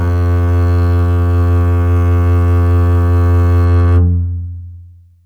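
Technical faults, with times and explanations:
0.0 to 3.65 s, sample clock jitter: the converter's clock wanders by roughly 10 microseconds, so each sample of the music lands slightly early or late and picks up an amplitude error that grows with how fast the waveform is changing. That error sits around 40 dB below the music and is heard as a faint hiss and roughness on loud, bright passages. On a spectrogram it shows as a haze of noise spreading around strong high partials, and on the waveform as tiny irregularities on steep slopes.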